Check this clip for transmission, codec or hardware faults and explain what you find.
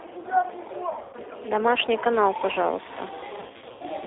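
Three faults are audible: a low-bitrate speech codec throughout, two bursts of concealed packet loss, and mains buzz in the second half.

G.729 codec, throughout: a model-based encoder, consistent with 8 kbit/s G.729A, rebuilds the speech over a 300 Hz to 3.7 kHz line band, leaving it plainly rough and synthetic.

VoIP packet loss concealed by the speech codec, 0.89 to 1.16 s and 3.40 to 3.83 s: missing packets, with runs up to 100 ms, were filled by extrapolating earlier frames, so the speech is stretched into a buzzy tone or coloured noise that fades before recovering.

Mains buzz, from 2.15 s to the end: switching spikes at twice the 60 Hz mains rate add a raspy harmonic buzz, roughly 20 dB below the speech.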